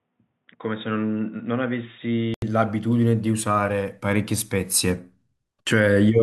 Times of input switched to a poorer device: 0.00-2.42

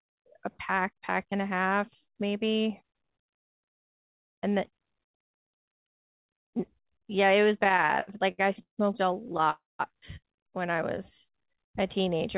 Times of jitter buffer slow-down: 10.95-12.37

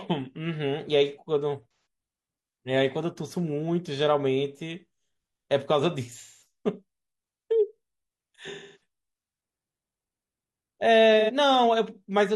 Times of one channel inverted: none

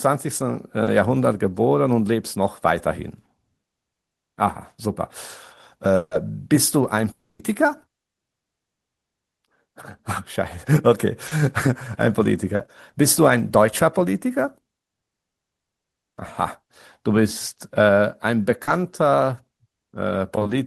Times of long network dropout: 5.95-6.14, 7.11-7.42

